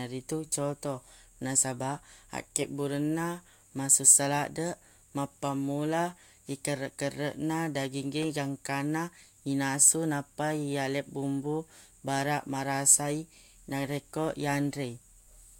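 A speech recording with a brief burst of loose connector crackle from about 8.23 to 8.25 s, just before "gangkanna inasu nappa". A worn or dirty contact making and breaking as it shifts chops the signal into a ragged scratch, with pops from any DC on the line. What separates it from a single digital click or mouth noise is its irregular, multi-impulse texture across those few tens of milliseconds rather than one clean transient.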